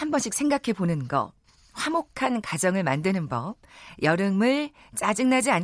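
No technical faults can be heard anywhere in the speech recording. There is nothing to place on a timeline.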